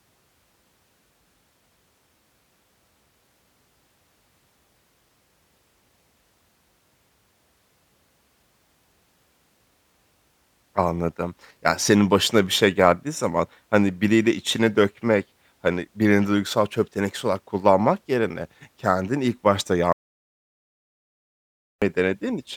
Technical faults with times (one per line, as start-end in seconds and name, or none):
19.92-21.82 audio dropout to silence